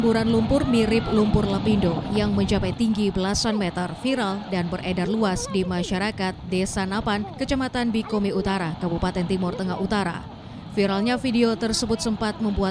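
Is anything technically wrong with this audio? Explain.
No, nothing technically wrong can be heard in this audio. There is no audible problem at any point in the clip.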